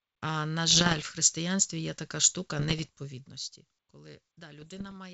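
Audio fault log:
0.68–1.07 s, 2.59–2.87 s (just after "є така штука"), 4.58–4.95 s: bit errors on an ADPCM link, under one percent of bits flipped, knock the decoder's step size and predictor off track, producing pops, rough bursts and brief level jumps.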